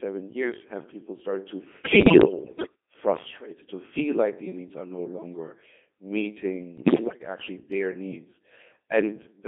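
Throughout, the speech has passed through a Codec 2 vocoder. Only pitch, voicing, energy and a spectral outline survive, and the decoder rebuilds the voice from sine waves, so the heavy damage sounds robotic and buzzy, confined to 200 Hz–3.6 kHz, at 2.4 kbit/s. From 1.84 to 2.75 s, and again from 6.78 to 7.2 s, bit errors on the digital voice radio link, at a rate of several percent, corrupt frame parameters. The synthetic voice lurches in pitch, loudness and timbre and dissolves into warbling, bleeping gibberish.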